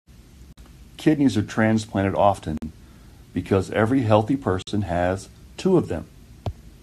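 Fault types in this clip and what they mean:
Gap at a join of encoded pieces: the speech drops out for about 48 ms every 2 s, with smeared edges, then resumes where it stopped. Separately encoded pieces were joined untrimmed, so each encoder's start-up delay and last-frame padding stayed in as silence.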